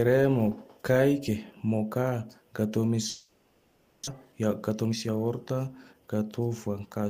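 From 3.09 s to 4.09 s the speech stops and the last sound is drawn out as a buzzy, hissing continuation that fades over almost the entire second, with no clean silence. Afterwards the speech resumes further along, with about 600 ms of it simply gone. This is most likely a long network dropout: nothing arrived for that stretch, so the receiver filled the gap by extending the last sound, and the lost portion was never played.

From 4.25 s to 6.81 s the speech sounds noticeably hurried, running at about 113% of normal speed while the pitch stays the same. This is a jitter buffer speed-up. After the gap, delayed audio arrived in a bunch, leaving the buffer holding roughly 300 ms more than its target. To bring the delay back down, the receiver repeatedly cut out short pieces one or a few pitch periods long, removing about 300 ms in total.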